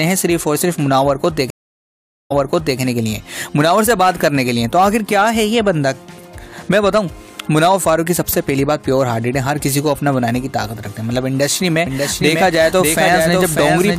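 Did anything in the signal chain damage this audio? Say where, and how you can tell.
Yes. At the network and playback stage there is a stream reconnect from 1.50 to 2.79 s. The audio drops out for about 0.8 s, then resumes roughly half a second earlier than where it stopped, so material repeats. A fresh decoder restarted mid-stream after the connection broke.

From 11.86 s to the end, a doubled audio track appears: a full-band copy of the sound trails the original by roughly 0.7 s at about 5 dB lower, with no decay or room colour, starting abruptly. This is likely a second, slower capture path mixed in.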